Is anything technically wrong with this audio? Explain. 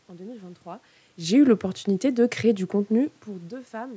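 No, nothing stood out as a technical problem on listening to this speech; the level changes around 0.5 s and 3 s sound like the talker shifting relative to the microphone, and the background room noise and missing lowest bass are normal for call audio.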